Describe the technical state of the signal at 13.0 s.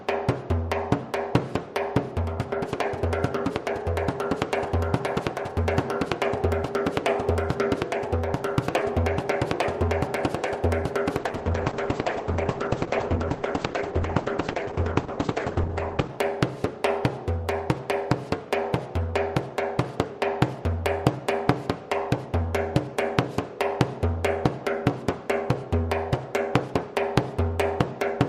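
At 13.0 s the signal sits inside a call bitrate drop running from 11.19 to 16.15 s. The encoder, starved of bits, codes coarsely and cuts the top band, so the sound turns rough and muffled, consistent with roughly 10 kbps. On a spectrogram, content above 8 kHz vanishes abruptly.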